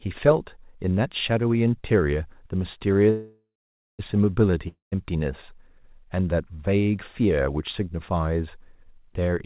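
From 3.1 to 4.01 s there is a call audio freeze. The last sound is carried on as a fading buzz for a few tenths of a second, then about 0.52 s of silence, and the audio resumes where it stopped, with nothing lost but everything after it now about 0.89 s late. This is likely packets held up so the jitter buffer ran dry. On a spectrogram it shows as a smeared, decaying copy of the preceding frame followed by a blank band; on the waveform, a tapering envelope then a flat line.

At 4.68 to 4.94 s a long network dropout follows. About 0.24 s of audio is filled with a similar fading continuation that ends in about 0.14 s of silence. Unlike the freeze, playback comes back further on, so roughly 0.24 s of the original is simply gone, likely because those packets never arrived. The spectrogram shows a short smeared tail, a gap, then a hard jump to content that doesn't continue the earlier pattern; the waveform shows a brief taper, a flat stretch and an abrupt restart. 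Throughout, nothing appears above 4 kHz, consistent with a G.711 mu-law call path at 64 kbps.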